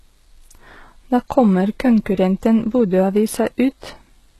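Speech throughout, with the treble showing the signature of HE-AAC compression at a very low bitrate, something on the order of 16 kbps. Nothing sits above 12.3 kHz, and the top band sounds synthetic: its harmonics fail to line up with the lower spectrum, so sibilants come out gritty and metallic. This is likely spectral band replication, where upper bands are copied from lower ones and shaped only by a coarse envelope. The damage is heavy across the whole clip.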